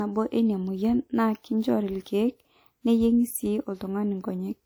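Transcoding between lossy codecs runs throughout the speech, with nothing above 20.1 kHz. The mixed artefacts point to a likely chain of a WMA encode near 64 kbit/s re-encoded as MP3 around 96 kbit/s, the second codec spending bits on the first codec's artefacts and adding its own.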